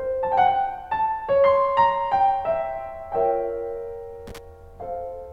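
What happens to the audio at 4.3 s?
Loose connector crackle from 4.27 to 4.38 s: a worn contact chops the music, leaving ragged dropouts and irregular crackle as broadband vertical streaks on a spectrogram.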